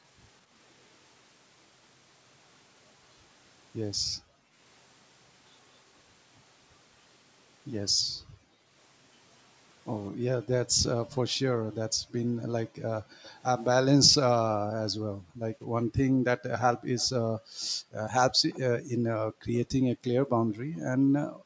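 From 3.98 to 4.57 s and 7.91 to 8.71 s, background gated by the echo canceller: while far-end audio played, suppression pulled the room sound down by about 40 dB, so it briefly vanishes. The same gating recurs from 10.11 to 13.23 s. Within it, an echo leak appears from 10.67 to 11.15 s and again from 13.23 to 13.31 s: a faint delayed copy, about 25 to 30 dB below the speech and trailing by roughly 0.22 s, likely far-end loudspeaker pickup the canceller failed to remove. Gating returns from 14.5 s to the end, and that echo leak recurs from 16.98 to 18.59 s at about 0.23 s delay.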